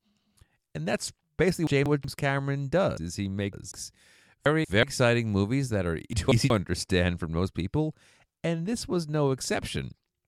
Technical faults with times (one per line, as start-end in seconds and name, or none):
1.67-2.04 chunks out of order
2.97-3.72 chunks out of order
4.46-4.83 chunks out of order
6.13-6.50 chunks out of order